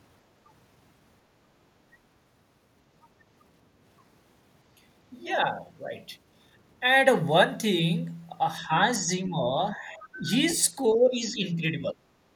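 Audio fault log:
8.61–8.71 s, 8.99–9.4 s, 9.72–10.3 s and 10.94–12.02 s, speech suppressed in double talk: the speech gets pushed down in a run of bursts that grow longer and deeper. The first dips are shallow, around 5 dB, then about 10 dB, and the last stretch loses roughly 15 dB for most of a second. The echo canceller likely heard both ends talking at once, couldn't separate this talker from the loudspeaker echo, and turned both down together.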